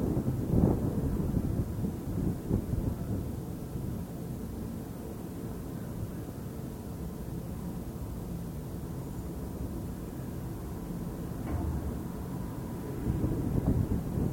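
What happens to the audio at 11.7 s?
At 11.7 s the audio plays through intact, with no dropout, click, distortion or other fault.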